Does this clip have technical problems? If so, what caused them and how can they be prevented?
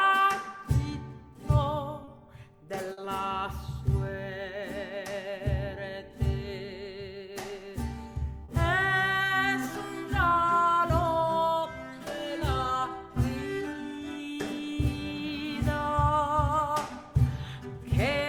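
Yes. Short concealed packet loss occurs at 2.04 s and 8.44 s. About 30 ms and 40 ms of audio never arrived in time. The receiver extended the preceding sound to fill each gap, giving a brief smear or wobble. A larger jitter buffer or forward error correction would prevent it.

A burst of packet loss runs from 2.92 to 2.98 s. About 50 ms in a row went missing. The receiver continued the last sound and faded it, so a short held buzz or hiss replaces that stretch. A steadier network path with redundant packets would prevent it.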